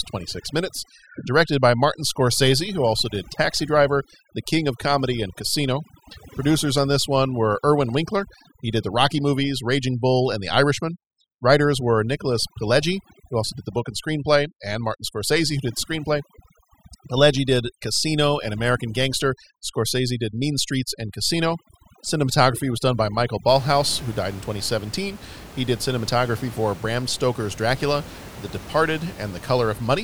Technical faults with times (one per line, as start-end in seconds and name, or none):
0.00-23.48 overdone noise removal